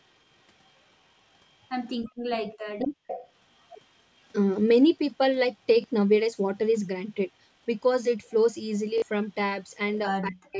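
Right at 0.65–0.7 s and again at 1.89–1.93 s there's a very faint trailing copy of the speech about 0.24 s late. That's echo leak, likely from a loudspeaker on the far end whose echo canceller let a little through. Then at 3.07–3.29 s the same echo comes back much stronger, only about 10 dB under the speech, at roughly a 0.25 s delay.

In between, at 2.01–2.07 s and 2.77–3.05 s, the speech briefly dips hard, by something like 40 dB. That's speech suppressed in double talk, likely the canceller ducking everything while both sides were active. The same deep dropout hits again at 10.2–10.58 s, near the very end.

At 5.82–5.84 s and 8.98–9.02 s you get a quick stutter with hard joins. That's a repeated buffer, where audio arrived late and the last 20 ms chunk was replayed, once the first time and twice the second.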